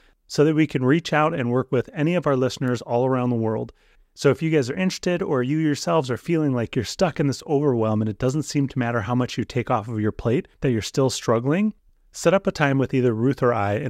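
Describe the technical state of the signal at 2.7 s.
A single flipped bit in one sample at 2.68 s, between "with any of our" and "all around the world", causes a bit error spike: one sharp broadband tick peaking at about -19 dBFS.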